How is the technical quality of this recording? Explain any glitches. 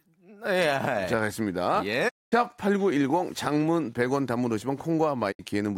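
Two digital broadcast dropouts break up the speech. At 2.08 to 2.34 s and again at 5.31 to 5.41 s, the receiver stopped getting usable frames and muted until clean ones returned. The sound fades out over 20 ms into silent gaps of about 224 ms and 64 ms, consistent with seven and two lost frames, and whatever was said during them is gone.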